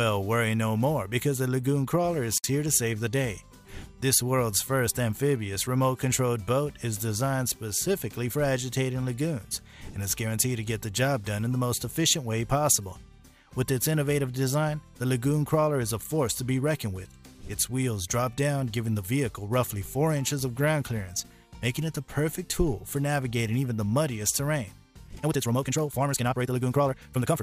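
At 2.38 s the sound drops out for about 60 ms, to 2.44 s: a gap at a join of encoded pieces. Two separately encoded segments were butted together untrimmed, so encoder start-up delay and end padding sit between them. The waveform shows a flat hole with slightly softened edges, and the spectrogram a blank vertical stripe before the sound resumes where it stopped.

From 25.05 s to the end, the pace suddenly jumps to about 1.85 times normal while pitch holds steady, sounding rushed. This is likely a time-stretched section, squeezed by discarding short slices. The spectrogram shows compressed events, with small discontinuities where pieces were dropped.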